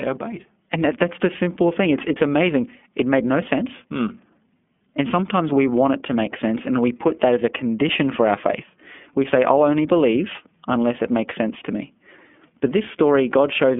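A speech recording coded with the iLBC codec for its full length. Nothing above about 3.6 kHz remains, and the usable band sits near 200 Hz to 3.4 kHz, giving a thin telephone-line sound. The coding damage is plainly audible as a rough, slightly synthetic texture. iLBC codes each frame's excitation independently of the previous one, and the behaviour here fits its 30 ms frame, 13.33 kbps mode.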